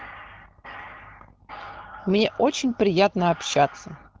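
Nothing stood out on listening to this speech, which has the sound of an AMR wideband (HD Voice) call at a rate that fits 12.65 kbit/s.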